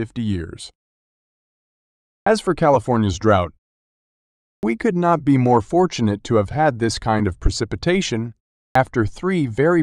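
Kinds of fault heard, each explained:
Clipped start after a pause: the output wakes late after silence, chopping roughly 45 to 50 ms off speech onsets at 2.22, 4.58 ("could not be more") and 8.71 s; waveforms start abruptly, with no rising edge.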